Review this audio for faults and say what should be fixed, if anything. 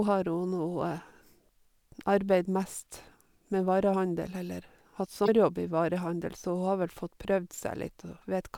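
Damaged data in a compressed stream at 5.25 to 5.29 s: corrupted frames throw the decoder out of sync, causing a 40 ms blip that shows as a brief broadband smear on the spectrogram. Checksum the file or stream and use error-resilient transport so corrupted frames are caught before decoding.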